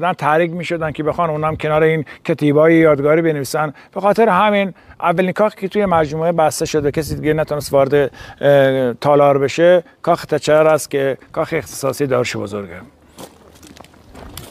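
No technical faults are audible.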